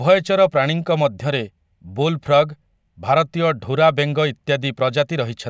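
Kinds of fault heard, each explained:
No faults heard: no dropouts, clicks, distortion, level jumps or timing errors anywhere in the speech.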